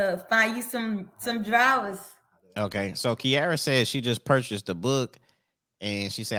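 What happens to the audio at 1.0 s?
Nothing goes wrong at 1.0 s; the speech carries on cleanly through that moment with no dropout, click or distortion.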